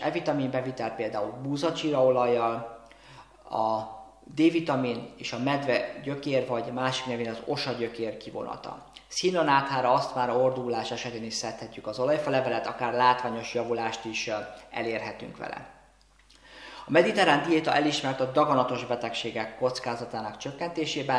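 No dropouts, clicks, distortion or level jumps turn up anywhere in the audio.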